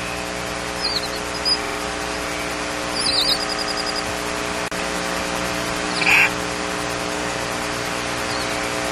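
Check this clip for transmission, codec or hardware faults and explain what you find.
The clip has repeated frames at three points. At 1.63 s, a 46 ms block stutters three extra times. From 3.46 s to 4.02 s, a 93 ms block replays six times. At 6.02 s, a 46 ms block repeats once. Compressed frames were duplicated, so the decoder played them again.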